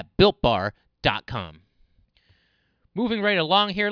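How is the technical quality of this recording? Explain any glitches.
The speech recording has no audible glitches or technical faults anywhere in the signal.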